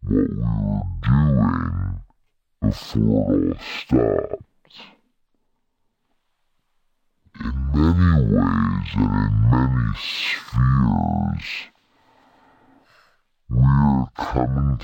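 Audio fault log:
throughout, stereo read as mono: the speech plays at half speed and sits a full octave, 12 semitones, below where it should. The left and right samples of each stereo frame have been taken in turn as successive samples of a single channel, so every moment of sound occupies twice as many samples. Played at the intended rate, the audio stretches to double length and drops an octave, with a fainter mirrored copy appearing in the upper half of the spectrum.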